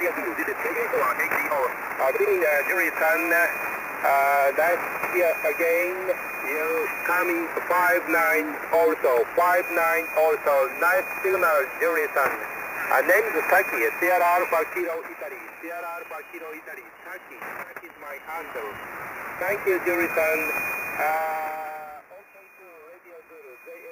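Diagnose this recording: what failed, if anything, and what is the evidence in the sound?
A time-stretched section opens the audio, most likely from editing or playback software compressing the first stretch to fit a length, holding pitch by dropping short slices. From 0.0 to 2.76 s the material runs at about 1.9 times its natural pace while its pitch stays put, so it sounds rushed. At 2.76 s the pace drops abruptly to normal.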